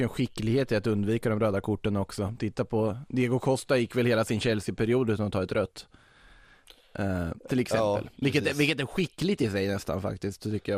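From the start, the speech sounds dull, with a gurgling, granular edge. This is likely MP2 compression, at a rate that fits about 80 kbps. Too few bits reach the upper sub-bands, so they switch off and flicker back. The remaining bands are coarsely quantised.

From 7.15 to 7.35 s, just before "till exempel", there is DAB burbling. Bit errors slip past error correction into 8 frames. Wrong samples put short blips of noise into single sub-bands.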